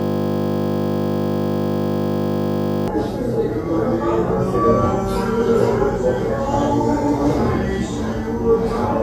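A system hang loop is already under way when the audio begins and lasts until 2.88 s. The playback system froze, but the sound hardware kept reading the same small ring buffer. A single 20 ms slice of sound repeats exactly, well over a hundred times. Because the slice is so short, the repeats merge into a steady, flat buzz at 50 Hz, the loop rate. The real audio resumes at 2.88 s.

Compressed frames were skipped at 7.87 s. About one frame of the encoded stream, roughly 20 ms of sound, never reached the output, either because it was missing or because the decoder rejected it as damaged. The 23.2 ms frame length fits a 1024-sample codec frame at 44.1 kHz. The audio jumps forward by that missing stretch.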